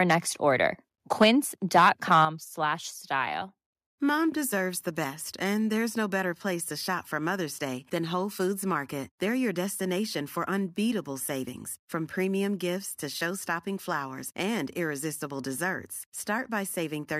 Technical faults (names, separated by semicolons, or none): microphone overload; microphone volume stepped down